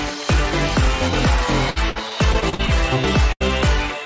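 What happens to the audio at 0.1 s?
Nothing goes wrong at 0.1 s: the audio there is intact, carried normally through the WebRTC call path with its band ending at 8 kHz, as wideband call audio does.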